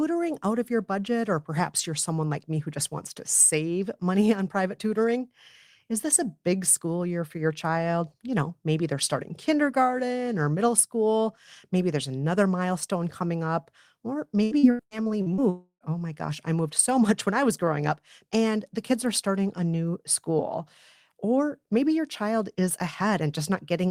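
From 14.43 to 15.41 s the speech turns choppy and robotic, broken by a string of short holes up to about 78 ms long. This is repeated packet loss: audio kept arriving late or missing, and each gap was filled by stretching the previous sound, covering roughly 39% of that stretch.

Right after, from 15.50 to 15.84 s, the sound smears into a fading buzz, then drops to about 90 ms of silence before returning with material skipped. The likely cause is a long network dropout, with about 320 ms of audio never received.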